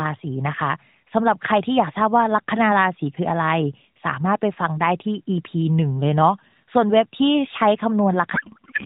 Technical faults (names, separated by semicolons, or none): codec payload misread